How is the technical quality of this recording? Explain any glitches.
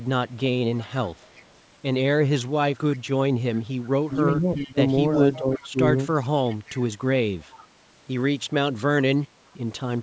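The speech has two recurring glitches, both typical of a speakerphone call.

Echo leak appears at 0.44–1.57 s, 2.72–2.99 s, 3.82–5.69 s, 6.23–6.8 s, 7.41–7.65 s and 9.22 s. A faint copy of the far-end talker returns 362 ms late, about 25 dB below the speech (about 20 dB at 6.23 s, about 35 dB at 9.22 s). The likely cause is an echo canceller that is not fully cancelling loudspeaker pickup. On a spectrogram these show as weak, smeared harmonic traces offset in time.

Speech suppressed in double talk occurs at 4.07–4.81 s and 5.37–5.77 s, while the echo overlaps the talker. The likely cause is the canceller ducking both signals together. The voice dips by about 15 dB and then about 10 dB, affecting about 400 ms and 200 ms in total. These appear as sudden notches in the waveform envelope and faded bands in the spectrogram.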